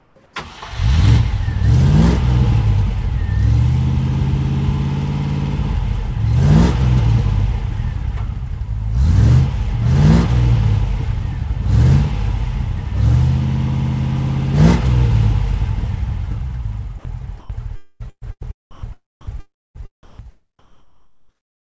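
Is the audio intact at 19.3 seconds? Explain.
No. At 19.3 seconds the audio sits inside sound chopped by the voice detector. One stretch runs from 17.76 to 20.25 s, and a second overlaps it from 19.21 to 20.19 s. The sender's voice detector is likely toggling transmission on and off. In each stretch, about 0.57 s of real sound in all is swapped for synthetic comfort noise. The result is choppy, inside a band already capped near 8 kHz by the G.722 call path.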